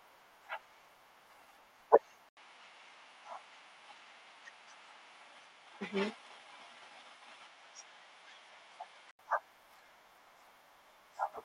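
Input switched to a poorer device, likely, from 2.29 to 9.19 s in this speech clip. After an 80 ms silence the sound narrows, with nothing above 10.8 kHz, and a new noise floor appears roughly 50 dB down. The level stays about the same.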